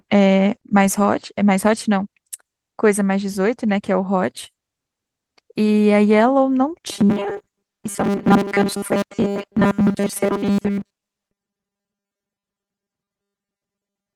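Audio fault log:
6.92 to 14.15 s, robotic sound from repeated short buffers: From 6.92 s to the end, the speech becomes a rigid, metallic buzz. It still roughly tracks the words. The buzz sits at a fixed 200 Hz, which fits a buffer about 5 ms long. New audio likely arrives too seldom. The last short stretch is replayed to fill each gap, and the real audio in between is skipped. This repeating covers most of the passage.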